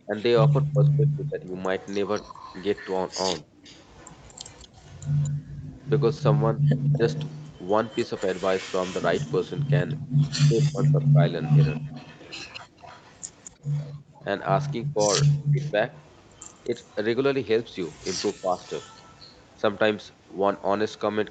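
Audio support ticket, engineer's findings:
Echo leak, 0.0 to 20.99 s. Delayed copy of the speech throughout, trailing by 230 ms. Sits around 20 dB below the main talker. Likely cause: far-end loudspeaker echo not fully cancelled and sent back. Canceller residual reaching the line.

Speech suppressed in double talk, 0.06 to 18.58 s. Talker dips and cuts out in pieces while the other side speaks. Drops reach roughly 25 dB, about 2 s in total. Likely cause: canceller failing to separate near talker from echo, attenuating both.

Background gated by the echo canceller, at 5.32 to 5.74 s, 10.02 to 10.13 s and 13.93 to 14.13 s. Room sound drops out, then returns. Depths about 31, 30 and 33 dB. Canceller clamps the microphone hard while the loudspeaker plays, then releases.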